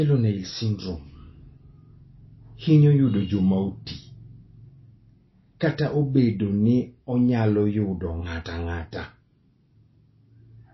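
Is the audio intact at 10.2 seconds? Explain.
No. MP3 compression affects the whole clip, including 10.2 s. A likely starved encoder drops everything above 5.8 kHz and flickers weak detail, so the speech sounds dull and watery.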